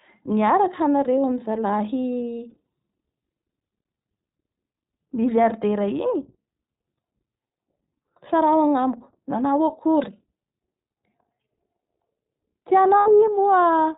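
Throughout, the speech sounds slightly rough and synthetic, with nothing above 4 kHz. This is the iLBC codec, a narrowband coder that encodes each short frame independently; the plainly audible damage fits its 15.2 kbps mode with 20 ms frames.

From 2.50 to 2.66 s, brief buzzy, held-vowel fragments break through the speech, and the voice snaps back almost immediately. These are lost iLBC frames, about 80 ms in all scattered in short runs, each patched by repeating the last pitch cycle with noise. At 12.98 to 13.09 s, about 80 ms of lost iLBC frames gives a held, breathy buzz before the voice recovers almost at once.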